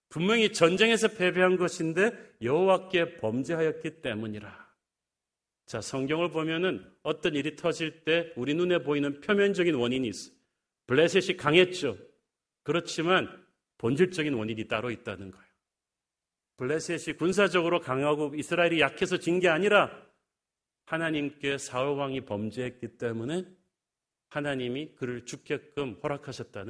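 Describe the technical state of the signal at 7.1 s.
At 7.1 s the speech signal is intact, with no dropout, clipping, distortion or other fault audible at that moment.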